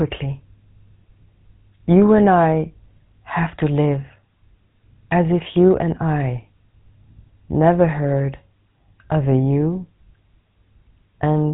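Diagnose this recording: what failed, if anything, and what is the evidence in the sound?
Codec stage: GSM full-rate codec damage throughout the speech, with a buzzy, gravelly roughness and nothing above 3.9 kHz. Unlike plain band-limiting, the coarse pulse excitation roughens the voice itself, which fits a 13 kbps coder.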